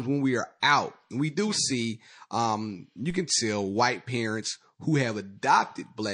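Throughout the speech there is a watery, swirling quality, with treble cut short and sibilants turning metallic and chirpy. The likely cause is MP3 compression at a low bitrate, around 40 kbps, starving weak frequency lines so they flicker between frames.

From 0.60 to 0.63 s a brief hiss, about 11 dB above the quiet around it, runs ahead of a sharp onset that sounds softened. This pre-echo comes from quantisation noise spread across a long transform block of roughly 52 ms, which suggests the encoder never switched to short blocks.

At 3.10 s a low thump cuts in while the speech carries on unchanged. This is a DC step: the waveform's zero line jumps abruptly, and the offset then bleeds away in a way that fits a 5 Hz high-pass filter pulling it back to centre.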